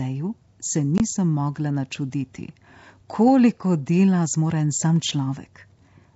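Speech, carried over G.722 wideband telephone coding. There is one packet loss on an ADPCM call at 0.98 to 1.00 s. About one packet, 20 ms, drops out and becomes a hard-edged silent gap. The decoder's adaptive predictor and step size then lose sync with the sender's, which disturbs the sound just as it resumes.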